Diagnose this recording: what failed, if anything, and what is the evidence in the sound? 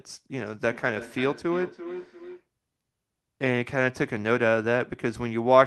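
Feedback echo between two devices, from 0.46 to 2.48 s, arises in call processing, in the acoustic loop between two devices in the room. Each stretch of speech returns at about a 300 ms interval, thinner and with a ringing colour, peaking at about 14 dB below the direct speech. A second device is playing back this microphone's signal, and the microphone picks it up again. Each device's echo canceller removes only its own playback, so the repeat gets through.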